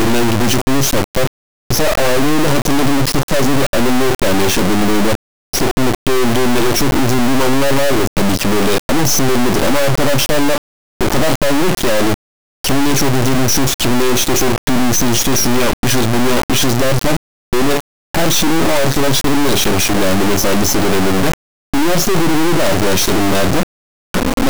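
Throughout, integer read as float: a loud buzzing square wave that falls silent in quiet passages, unlike plain clipping, fitting 32-bit integers decoded as float.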